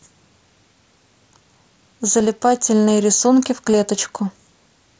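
At 2.2 s and 3.72 s, concealed Bluetooth headset packet loss patches the speech. Gaps of 7.5 ms and 15 ms, fitting one then two lost packets, are refilled by repeating recent waveform. Unlike a plain dropout, there's no silence or click, just a near-hidden smear at 2.2 s, and a brief buzzy tone with a small warble as real audio returns at 3.72 s.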